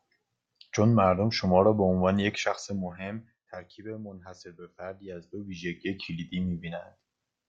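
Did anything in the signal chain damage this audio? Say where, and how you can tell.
Yes. Zipper noise from stepped gain in the buffer stage: 2.36–3.92 s (down about 15 dB) and 5.0–6.0 s (back up about 15 dB) tick roughly 30 times a second, unlike smooth fades.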